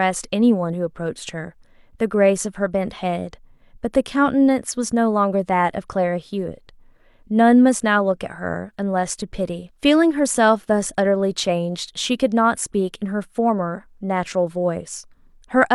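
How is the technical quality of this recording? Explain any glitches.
No glitches turn up anywhere in this speech recording. Nothing breaks into the sound at any point, so there is nothing to explain.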